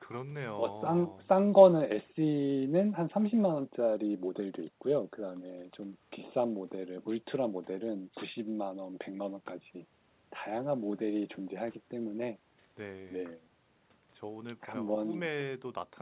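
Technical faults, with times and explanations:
The speech arrives over a call path with nothing above 4 kHz and the coarse coding noise of a narrowband telephone codec, which fits G.711 mu-law at 64 kbps, and no technical faults can be heard.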